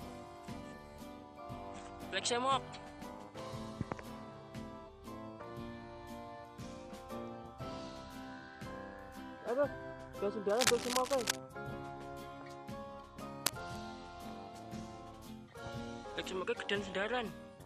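From 10.49 to 11.39 s there's a burst of cable scratch noise, a dense, ragged rustle sitting a bit above the sound itself, then a shorter one at 13.46 to 13.77 s, roughly level with it. Likely a worn cable or connector being shifted.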